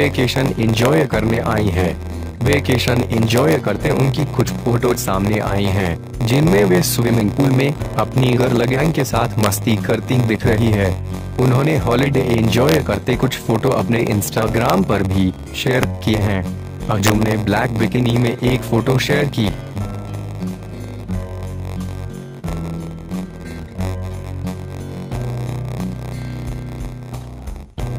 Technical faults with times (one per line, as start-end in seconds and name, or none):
0.00-27.98 block size mismatch (padded)
0.85 integer overflow
2.53-2.88 integer overflow
3.38-3.52 integer overflow
9.43-9.46 integer overflow
12.69-12.75 integer overflow
14.70 integer overflow
15.83 integer overflow
17.07-17.10 integer overflow